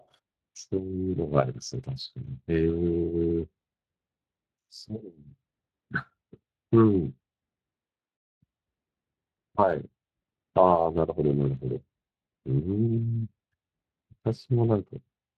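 Speech runs through the Speex codec for its full length, with plainly audible damage: a hoarse, noisy texture from a starved excitation, consistent with a mid-range setting around 22 kbps. Unlike transform codecs' swirly, watery artefacts, this roughness comes from coarse modelling of the speech signal.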